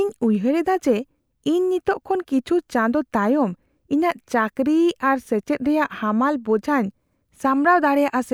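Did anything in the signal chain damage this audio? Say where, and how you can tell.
No, nothing in the signal chain damaged this audio.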